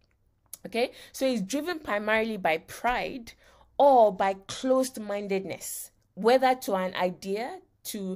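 In this speech recording, just after "so it's", from 1.73 to 1.81 s, the sound briefly drops by about 6 dB before "primarily by pride" resumes at full level. The likely cause is one channel dropping out for those 80 ms, which halves what both channels shared once they are summed to mono. Later, from 3.80 to 5.25 s, the treble goes dull and a gritty grain rides over the speech before clarity returns. This is a Bluetooth SBC bit pool drop. On a congested link the encoder cut its bit allocation, which sounds like a fall from a bit pool of about 31 to about 13, near 94 kbps. The highest sub-bands were starved and the remaining ones were coarsely quantised.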